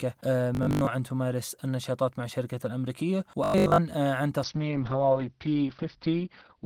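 From 0.55 to 0.91 s, and again from 3.44 to 3.80 s, new audio was likely arriving too seldom, so the last fragment was replayed while real audio was skipped. That is robotic sound from repeated short buffers. The result is a rigid metallic buzz at 50 Hz, which fits 20 ms repeats. About half of the first stretch and most of the second is repeated material.

From 4.45 s to the end, a call bitrate drop starves the encoder. This fits a fall from 32 to 7 kbps. The bandwidth narrows from 20 kHz to 6 kHz, so the speech turns muffled and rough, with a watery coarseness.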